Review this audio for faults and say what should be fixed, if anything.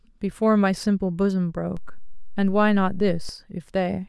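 A DC step shifts the waveform's zero line by about -27 dBFS at 1.77 s and returns at 3.29 s, giving a low thump at each transition while the speech continues unchanged. Applying a DC-blocking high-pass filter and keeping converter recalibration and input switching out of the recording path would prevent it.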